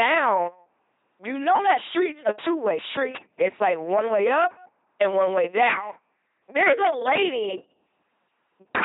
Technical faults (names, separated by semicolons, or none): LPC-10 vocoder